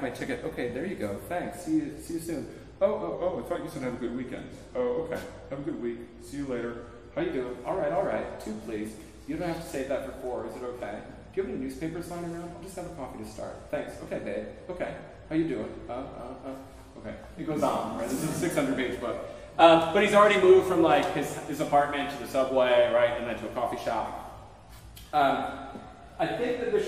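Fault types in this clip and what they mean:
Wrong sample rate: from 3.14 to 7.2 s the audio plays back slower than it was captured, with no rate conversion, so speed and pitch drop together. Everything runs at 0.919 times normal speed and sits about 1.5 semitones flat, which fits 48 kHz material played at 44.1 kHz. On a spectrogram, harmonics and formant bands shift downward in that span. In the waveform, events stretch out in time by the same ratio.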